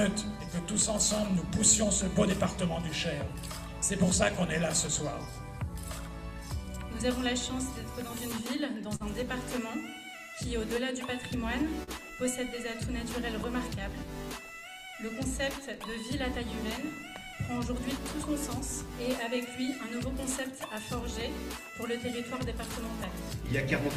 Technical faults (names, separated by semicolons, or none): short concealed packet loss